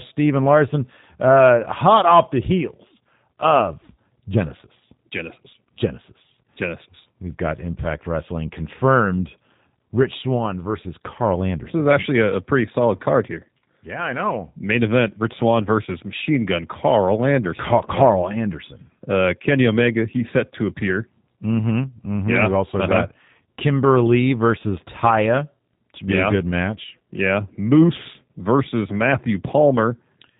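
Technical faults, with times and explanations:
throughout, G.729 codec: speech rebuilt from a vocal tract filter and sparse pulses, fitting about 8 kbit/s, cuts everything above 3.8 kHz and sounds plainly rough and synthetic.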